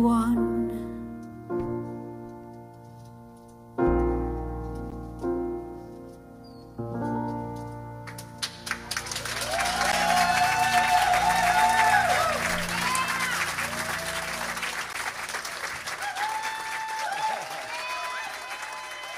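At 4.90 s, 9.92 s and 14.93 s the sound drops out for about 13 ms each time. This is a gap between chunks. The audio was delivered in pieces of 5 s, and a short stretch of silence sits at every join. Nothing is missing from the sound itself. It simply stops and restarts. Each hole is heard as a short dip. The holes come at regular intervals.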